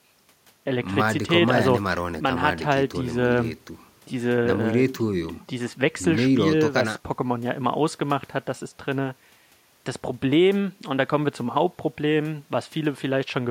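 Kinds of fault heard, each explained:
No technical faults can be heard in this recording.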